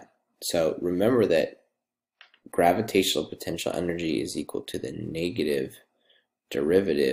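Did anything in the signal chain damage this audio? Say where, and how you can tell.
No, nothing in the chain from capture to playback left an audible mark on this recording.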